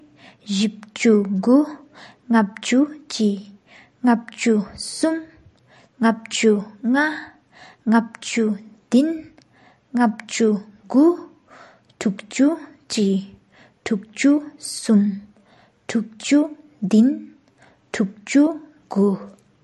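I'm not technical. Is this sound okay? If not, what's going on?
No. MP3 compression damage runs through the whole clip: nothing is left above about 11.6 kHz, so the speech sounds dull, and quiet detail flickers in and out, giving a watery, swirly edge to s sounds, likely from saving at too small a file size.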